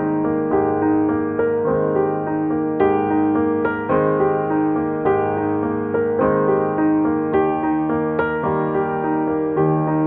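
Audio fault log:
No audible faults anywhere in this clip.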